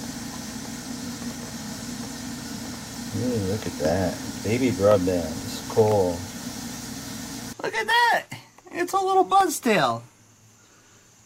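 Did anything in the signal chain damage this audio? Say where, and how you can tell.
Yes: regular ticks every 0.5 s from 0.41 to 10.9 s are periodic USB or driver dropouts, each blanking about a millisecond to silence at the driver stage.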